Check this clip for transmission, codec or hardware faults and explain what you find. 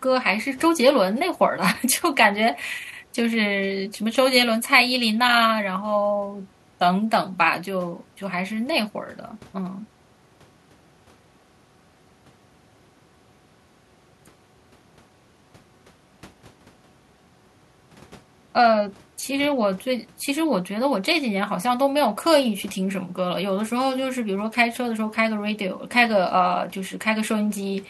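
Listening through the whole of the speech, I find no faults to report. No moment in the audio stands out from the sound around it as a problem that needs explaining.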